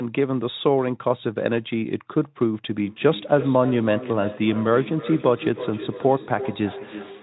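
A feedback echo between two devices sets in at 2.82 s and runs to the end of the speech clip. A second device on the same call is playing back what this microphone sent, and the microphone picks that playback up again, which its own echo canceller cannot remove. Each phrase returns roughly every 300 ms, thinner and more ringing, peaking at about 11 dB below the speech.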